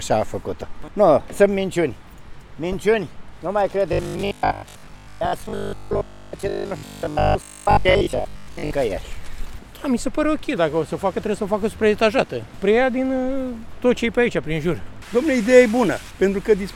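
From 3.93 to 8.71 s the audio turns into a rigid, metallic buzz fixed at 50 Hz that only loosely tracks the underlying sound. This is robotic sound from repeated short buffers, likely from new audio arriving too seldom so that a 20 ms chunk is replayed over most of that stretch while the real audio is skipped.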